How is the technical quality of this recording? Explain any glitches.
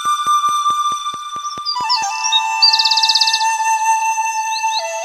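The recording has one glitch, in its first two seconds. From 0.05 s to 2.03 s there is a train of clicks: about ten sharp, evenly spaced ticks at 4.6 per second, peaking roughly 5 dB above the surrounding sound. Similar pulses at a steady rate most likely come from electrical interference or a faulty connection or power supply.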